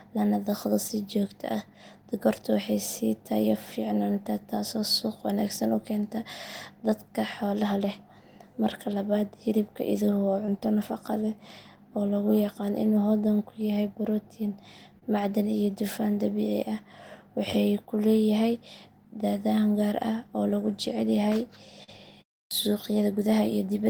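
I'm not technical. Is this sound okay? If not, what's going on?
No. At 0.87 s, right after "lana dhaqdo", and again at 10.45, 14.99 and 21.83 s, there's a tiny smear or wobble. This is short concealed packet loss: about 20 ms of the call (40 ms at 21.83 s) arrived too late, and the receiver patched each gap by stretching the sound just before it.

At 22.47 s, after a pause of about a third of a second, speech starts abruptly with its first 39 ms missing. This is a clipped start after a pause: the playback device dozed off during the silence and woke too slowly.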